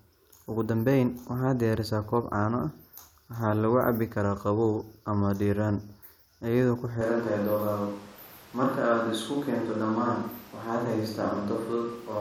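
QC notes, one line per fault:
7.01 s to end, switch to a distant microphone: suddenly roomy, hollow, bass-light, level barely moves, room noise about 25 dB under speech; likely close mic dropped out.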